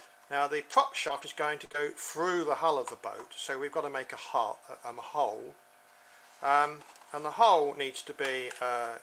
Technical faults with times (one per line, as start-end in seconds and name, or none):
0.61-1.81 scattered short gaps